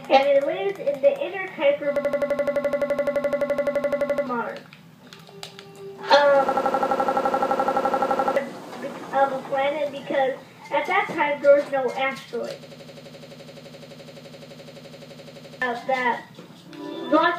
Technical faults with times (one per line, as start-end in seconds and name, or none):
1.96-4.27 system hang loop
6.49-8.36 system hang loop
12.63-15.62 system hang loop